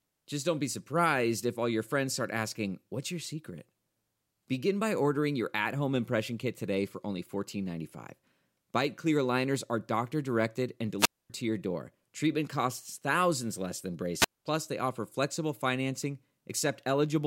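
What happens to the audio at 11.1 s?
A wireless microphone squelch dropout runs from 10.98 to 11.30 s, after "are doctor directed and". The fading radio signal trips the squelch. Hiss rises, then near silence for 0.25 s.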